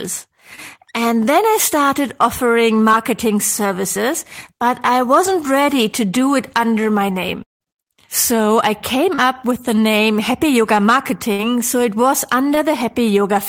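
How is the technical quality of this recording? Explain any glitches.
The recording is interrupted by six brief network glitches, mostly tiny smears plus one audible gap.

At 0.55, 2.91 to 2.95, 9.15 to 9.29 (after "I came", before "with the name") and 12.55 to 12.59 (after "so it was") there are short blurs or wobbles. This is short concealed packet loss: 20 ms of audio went missing each time (40 ms at 9.15), and the decoder stretched the preceding sound to cover it. At 9.15 it also adds a few milliseconds of delay.

From 7.43 to 7.63, just after "do it under my", the sound turns into a fading buzz and then about 160 ms of silence before resuming. Roughly 180 ms is lost, most likely from a long network dropout, where nothing arrived and concealment ran out.

At 11.33 to 11.41 there is a held, dimming sound as 60 ms goes missing. This is a burst of packet loss: several consecutive packets failed to arrive, so the receiver prolonged the last sound and faded it before playback continued.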